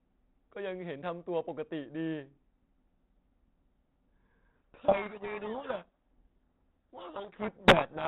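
At 4.56 s a codec payload misread begins and runs to the end of the clip. The G.726 code words arrive with their bit order reversed. The decoder still reads them as valid. Speech becomes buried in harsh distortion, and the light telephone-band coding noise before that fits 32 kbit/s G.726.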